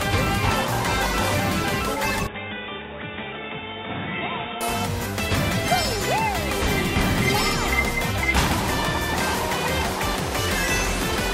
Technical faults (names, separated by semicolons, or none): input switched to a poorer device